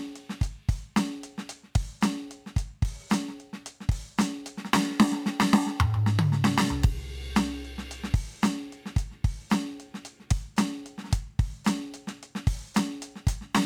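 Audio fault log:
No faults are heard in this music clip. There is nothing to log for any part of it.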